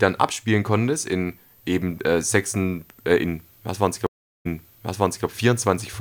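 Stream reconnect at 4.07–5.26 s: the connection dropped, leaving 384 ms of silence, then a restarted decoder resumes the speech 810 ms earlier, replaying audio.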